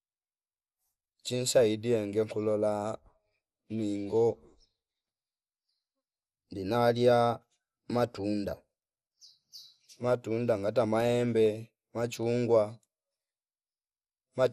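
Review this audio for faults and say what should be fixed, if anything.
Too few bits for the speech's sub-bands is the likely cause of the dull, gurgling quality across the whole clip. That points to MP2 compression at a low rate, which fits roughly 80 kbps. MPEG Layer II divides the signal into 32 sub-bands and shares out bits between them. Here the upper bands keep dropping out and the remaining ones are coarsely quantised, so the top end flickers and a granular grit sits on the speech throughout. To prevent it, encode at a higher MP2 bitrate or use a more efficient codec.

From 11.45 to 11.62 s, bit errors slipped past error correction into the MP2 data. That is DAB burbling, from a weak reception moment with an error rate of a small fraction of a percent. Corrupted samples put short blips of noise into individual sub-bands. The result is a short patch of burbling lasting a few frames, which fits around six damaged frames. 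To prevent it, improve reception with a better antenna or a stronger multiplex, or take the feed from a wired source.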